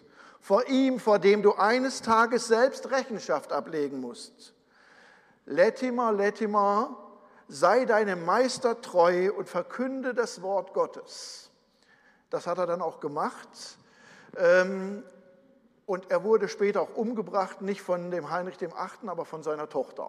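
No technical faults are audible.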